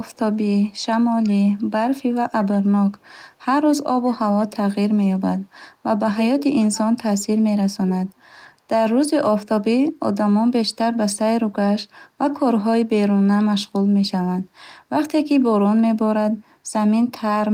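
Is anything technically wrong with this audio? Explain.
Yes. Two faults are audible in this speech.

Echo leak: At 0.13–0.18 s, 0.70–0.77 s and 4.05–4.15 s, faint ghostly copies of the voice trail it by about 160 ms, roughly 35 to 40 dB down. These are likely from a loudspeaker's echo canceller letting residual pickup through and sending it back.

Speech suppressed in double talk: At 6.1–7.53 s, 7.76–8.28 s, 9.06–9.49 s and 9.79–10.02 s, the voice sinks or breaks up in pieces, dropping by around 30 dB or more at its deepest. This is likely an echo canceller mistaking overlapping talk for echo and attenuating this talker along with it.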